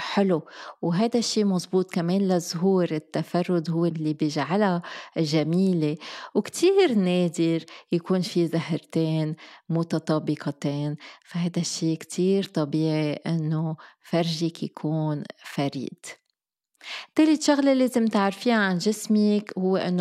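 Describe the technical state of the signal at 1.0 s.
At 1.0 s the speech carries clock slip clicks. They run from 0.11 s to the end of the clip. They sound like a soft, even rattle of faint ticks, roughly twenty a second, clearest on loud passages and gone in pauses. The likely cause is two devices on separate, unsynchronised clocks. The mismatch is a few hundred parts per million. Each time the drift adds up to a whole sample, one sample is dropped or repeated.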